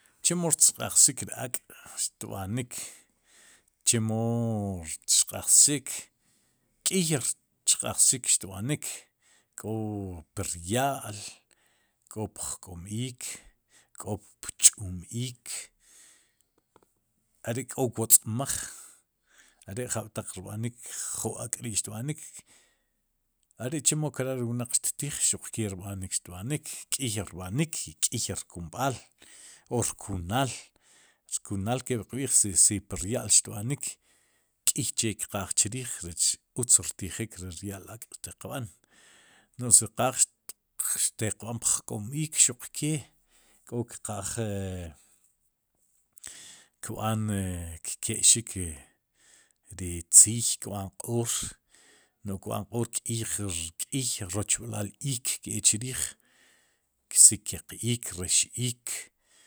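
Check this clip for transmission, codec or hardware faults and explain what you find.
There is nothing to find in this clip.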